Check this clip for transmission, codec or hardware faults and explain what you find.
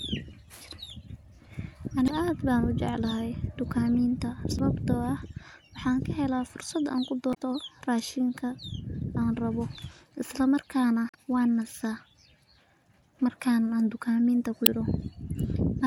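The speech has one fault, repeated five times. Damaged data in a compressed stream occurs at 2.05–2.10, 4.56–4.61, 7.30–7.36, 11.07–11.15 and 14.63–14.68 s. In each spot part of the encoded stream is corrupt, so the decoder misreads the affected frames, loses its place and has to hunt for the next valid frame header before output resumes. Each event is a short chirp or blip, about 45 to 85 ms long, breaking into the speech.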